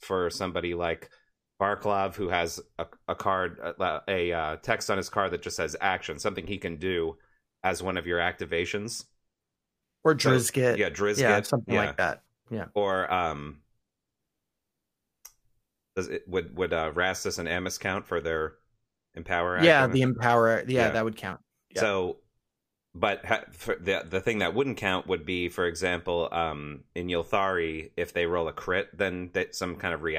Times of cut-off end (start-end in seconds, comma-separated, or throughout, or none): none